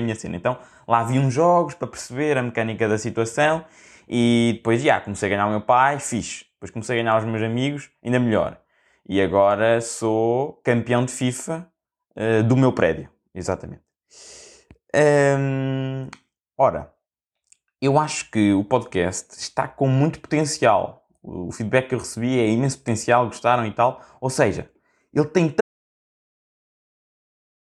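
The speech runs until 25.61 s and then stops abruptly in mid-flow, leaving an audio dropout to silence that lasts to the end at 27.65 s. The gap is silent with no room tone underneath, so the input was likely lost, through a disconnect, failed link or mute, while recording continued writing silence. On a waveform it appears as a flat line; on a spectrogram, a completely black block across all frequencies.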